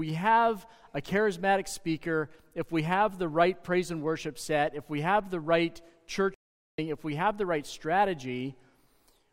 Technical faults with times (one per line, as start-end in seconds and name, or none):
6.34-6.78 playback stall